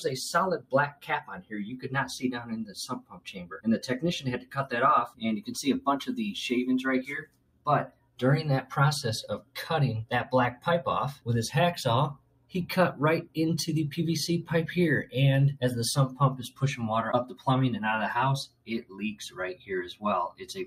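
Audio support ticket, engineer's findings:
Noise suppressor applied to music or sounds, full length. Level pumps and thins throughout, with a swing of roughly 15 dB. Probable component: a speech noise suppressor left active. It treats sustained tones, ambience and reverb as noise and ducks them. Onsets pass, held material and tails sink.

Sound cut by the noise suppressor at 0.58–5.52 s (drops by about 19 dB, around 3 s affected) and 7.21–13.37 s (about 19 dB, around 2 s). Also at 14.43–17.47 s (about 18 dB, under 1 s) and 18.47–20.65 s (about 19 dB, around 1 s). Sustained and decaying sound pulled down, tails truncated. Same suppressor, misclassifying steady content.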